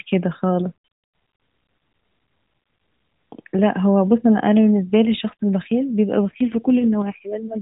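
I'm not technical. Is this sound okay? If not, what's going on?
No. From about 6.16 seconds to the end, the clip has an AMR rate drop. The mobile network told the phone's speech codec to squeeze the voice into far fewer bits, probably because the radio signal had weakened. The sound doesn't cut out and keeps the same muffled, phone-call range, but the voice turns rougher, buzzier and more artificial, like a cheap synthesizer imitating speech, and it stays that way until the clip ends.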